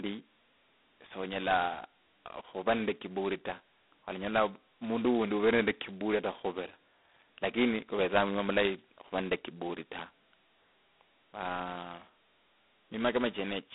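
A harsh, rasping hiss tracks the speech level throughout, with nothing above 3.9 kHz, pointing to heavy G.726 ADPCM coding, likely at 16 kbit/s.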